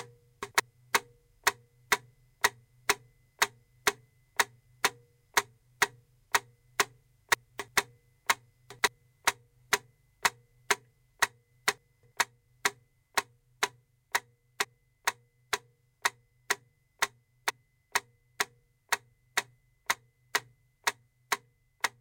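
At 0.43–0.60 s, 7.34–7.68 s, 8.70–8.88 s and 11.78–12.12 s the sound briefly jumbles: chunks out of order, where 85.33 ms blocks played one or three places late, leaving hard joins. At 14.63 s and 17.49 s the audio jumps ahead where compressed frames are skipped: about two 24 ms frames, roughly 50 ms of audio, dropped.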